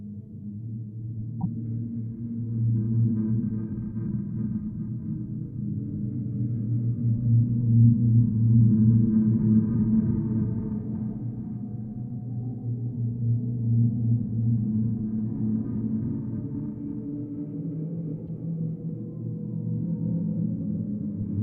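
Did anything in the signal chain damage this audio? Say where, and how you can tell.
Yes, damaged data in a compressed stream at the codec stage: short disruptions at 1.40–1.46 s and 18.27–18.29 s, where the decoder misread corrupted frames and lost sync.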